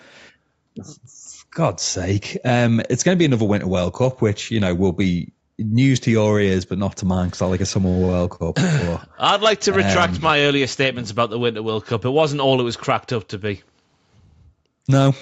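A speech recording that has passed through a call's microphone processing, with nothing technically wrong with it.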